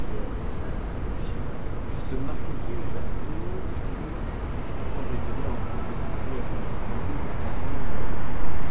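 No technical faults are audible anywhere in the clip.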